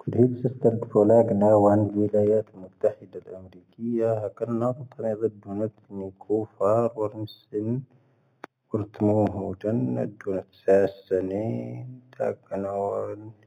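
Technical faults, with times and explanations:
Throughout, imaging from linear upsampling: the speech sounds dull at the top, with a faint metallic shimmer on sibilants. The rate was raised by joining samples with straight lines, which points to an original rate of 8 kHz. That weak interpolation rolls off the upper band and leaves a mirror copy of the spectrum between 4 kHz and 8 kHz, roughly 40 dB down. Unlike aliasing, this added content sits above the real band rather than folding down into it.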